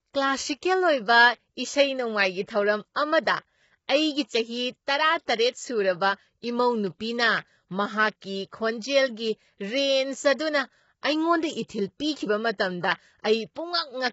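Low-delay AAC compression runs throughout: the speech sounds rough and grainy, with noise between harmonics and nothing above 7.7 kHz, likely from AAC-ELD at a rate that fits about 16 kbps. Pre-echo occurs at 2.94, 3.88, 11.67 to 11.69 and 13.54 s. At each of these attacks, block-spread quantisation noise leaks 15 to 21 ms ahead as a brief hiss and softens the onset.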